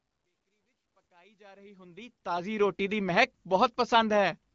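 No technical faults are audible.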